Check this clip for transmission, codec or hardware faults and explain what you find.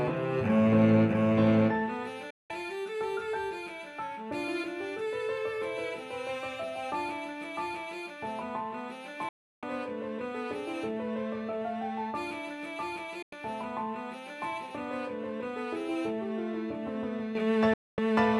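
Four digital broadcast dropouts at 2.30–2.50, 9.29–9.63, 13.22–13.33 and 17.74–17.98 s. The receiver mutes bad frames with a 3 ms fade, leaving true silence rather than concealed or smeared audio.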